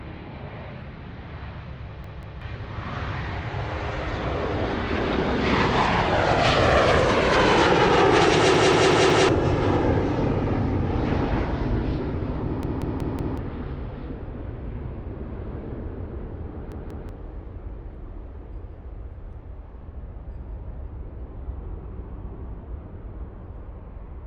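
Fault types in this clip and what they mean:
Repeated buffer: playback ran short of new audio, so a roughly 186 ms chunk, fitting an 8192-sample buffer, replays two or four extra times as a hard-edged stutter.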